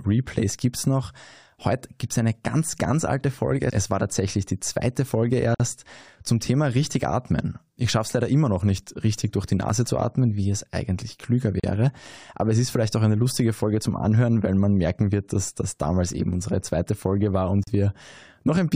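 At 5.55 to 5.60 s, 11.60 to 11.64 s and 17.64 to 17.67 s, the speech drops out for 51, 37 and 37 ms. These are gaps at joins of encoded pieces spaced 6 s apart, where separately encoded chunks were butted together with their encoder delay and end padding left untrimmed. Each sounds like a brief hiccup before the speech resumes exactly where it stopped. In the waveform each is a flat run with smeared edges. On a spectrogram it is a thin blank column, slightly blurred at its borders.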